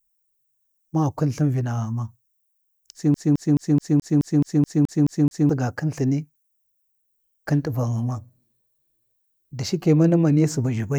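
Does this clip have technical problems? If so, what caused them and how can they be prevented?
Yes. A scratch on the disc kept throwing the player's laser back one track at the same point on every revolution, so the CD stuck on one turn from 3.14 to 5.49 s. The speech there collapses into a fast, even stutter: the same 214 ms fragment repeats eleven times, each repeat separated by a brief mute at the jump. Cleaning or resurfacing the disc, or ripping it with an error-correcting drive, prevents this.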